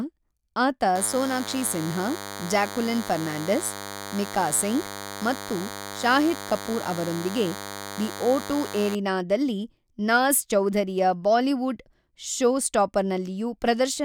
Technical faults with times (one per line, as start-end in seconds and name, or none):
0.95-8.95 DECT cordless phone buzz